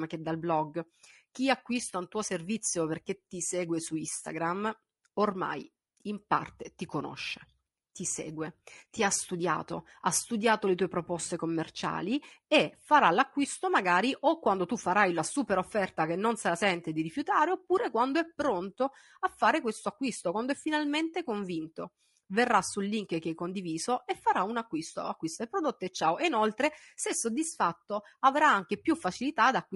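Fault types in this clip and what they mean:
Low-delay AAC compression, throughout: the speech sounds rough and grainy for the whole clip, with a hiss-like fill between the voice's harmonics and a top band that sounds thin and synthetic. The cause is likely a low-delay AAC codec such as AAC-ELD. Its very short frames cannot separate closely spaced pitch harmonics well and spend bits less efficiently, so the damage is plainly audible at the modest bitrate this suggests, around 32 kbps.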